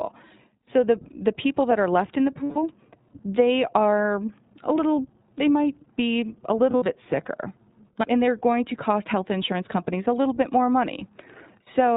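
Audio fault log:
Throughout: iLBC codec. The audio is band-limited, with nothing above 4 kHz, and has a slightly rough, synthetic edge. The coder models each 20 ms frame's excitation on its own rather than predicting from the frame before, so fine waveform detail is approximated rather than kept. The damage is plainly audible, and the dullness and grain fit the 15.2 kbps narrowband mode used for VoIP.
2.44–2.58 s and 6.70–6.88 s: lost iLBC frames. Just after "are left in the" and again after "they might be a", the speech turns into a short held, buzzy vowel. The decoder fills each gap by repeating the last pitch cycle mixed with noise. The first gap is a single 120 ms block. The second totals 120 ms spread over 160 ms, with the longest run about 70 ms. Each fits six lost frames, and because iLBC frames decode independently, the sound recovers almost immediately after each gap.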